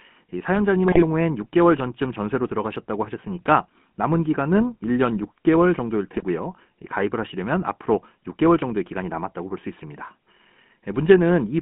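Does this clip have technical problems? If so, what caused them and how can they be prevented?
Yes. The whole recording carries GSM full-rate codec damage. The speech is confined to roughly 150 Hz to 3.4 kHz and has a plainly buzzy, gravelly texture from the regular-pulse excitation model, consistent with a 13 kbps stream. Capturing over a wideband or digital path rather than a GSM leg prevents it.

GSM bit errors produce squawking, gargled bursts at 0.86 to 1.03 s and 6.17 to 6.23 s. Corrupted filter, pitch and gain parameters distort several frames each, consistent with about 2% of bits flipped on a weak radio link. Better signal strength or stronger error concealment prevents this.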